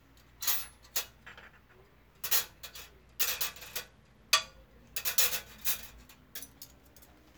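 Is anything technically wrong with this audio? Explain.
Yes. From 3.01 to 4.42 s there is a Bluetooth SBC bit pool drop: the link ran short, so the encoder spent far fewer bits, which fits a fall from bit pool 28 to about 13 and roughly 102 kbps. High sub-bands starve, so treble dulls and gritty noise rises. A spectrogram shows the top band emptying, with speckled noise below.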